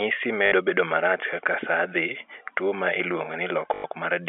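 A short robotic stutter, buzzing at about 50 Hz, hits at 0.46–0.52 s, just before "bedo marach kaka saa," and again at 3.74–3.84 s. This is packet loss with last packet repeated: the receiver replays the previous audio to fill 60 ms and then 100 ms gaps, which fits 20 ms packets, all heard through the telephone band of G.711 coding.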